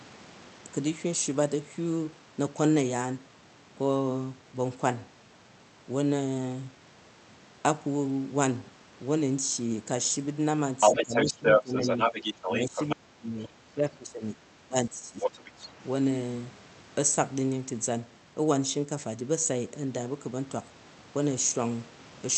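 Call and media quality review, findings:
Other side's voice leaking through, 10.8–12.96 s, 13.43–13.49 s, 15.21–15.67 s. Second talker audible alongside the near-end speech. First stretch runs a few dB above the talker. The brief scrap at 13.43 s sits far below. The last one is at roughly equal level. Likely cause: the echo canceller left part of the loudspeaker signal in the microphone feed. The residual got sent back upstream.

Speech suppressed in double talk at 10.91–11.14 s, 11.31–11.8 s, 12.45–13.51 s, 13.71–14.39 s and 14.64–15.59 s. Near-end level dips and drops out in pieces while the far end talks. Depth runs from about 10 dB at first to about 30 dB around 12.5–13.5 s. Likely component: the echo canceller. It could not split near-end speech from echo during overlap, so it attenuated both.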